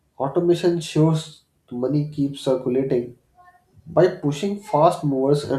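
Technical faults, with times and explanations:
No technical faults are audible.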